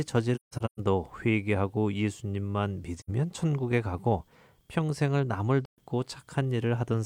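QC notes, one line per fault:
0.35–0.80 s: AAC frame loss with muting. Several short gaps scattered across this span, adding up to about 341 ms of silence, the longest run about 150 ms. The decoder zeroed the lost frames' spectrum, so the overlapping windows fade the speech down and back up. Each hole has soft edges, unlike a hard buffer dropout.
2.97–3.10 s: AAC frame loss with muting. A single hole of about 85 ms, which fits a couple of lost frames. The speech fades out and back in over roughly a frame because the muted spectrum is crossfaded by the overlapping windows. It is smooth-edged silence, not a repeated or smeared fill as concealment would leave.
5.65–5.79 s: AAC frame loss with muting. About 128 ms of speech is missing, which fits a few consecutive lost frames. The decoder output zeros there, and the window overlap tapers both sides into the gap. The result is a soft hole, not the abrupt cut of a sample-level dropout.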